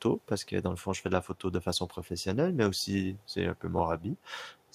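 No technical faults can be heard anywhere in the recording, with the speech signal staying steady and intact throughout.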